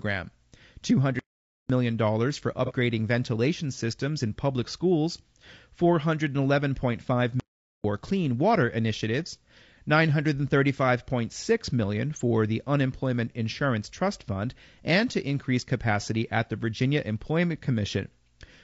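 Speech that sounds rough and grainy throughout, with noise filling the gaps between harmonics and a thin, synthetic upper band, likely from low-delay AAC compression (AAC-ELD) at a rate that fits around 32 kbps. On a spectrogram, the harmonic stripes look smeared and the spaces between them hazy. The sound cuts out in mid-flow from 1.19 to 1.70 s and again from 7.40 to 7.84 s, gaps of 503 ms and 445 ms. These are likely playback stalls where the player starved or blocked and then resumed. The waveform drops to a flat line across each gap, and the spectrogram shows a blank vertical band. At 2.66 to 2.72 s, about 30 ms of AAC frame loss with concealment leaves a brief smeared, noisy patch, consistent with one lost frame filled in from the previous spectrum. It shows as a short blurred column with the harmonics washed out.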